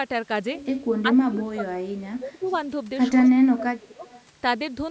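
From 1.02 to 2.47 s the speech dips and breaks up in pieces. About a second is lost in total, at worst by about 25 dB. This is likely speech suppressed in double talk. The echo canceller could not tell this talker from the far side and turned both down.

From 2.44 to 2.56 s a faint delayed copy follows. It arrives 209 ms late and sits about 30 dB below the speech. That is likely an echo leak, where the canceller let some loudspeaker pickup through.

From 3.21 to 4.04 s the suppression returns, cutting roughly 0.7 s of speech. From 4.06 to 4.22 s the same faint echo leaks again, 209 ms behind.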